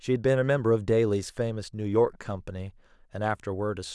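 No technical faults can be heard.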